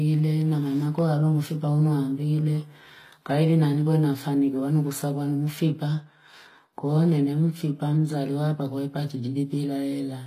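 From start to end, the speech carries plainly audible HE-AAC compression. Its treble is rebuilt from copied lower bands, so sibilants sound gritty and metallic. Nothing remains above about 15.4 kHz. The character likely points to a low bitrate, near 24 kbps.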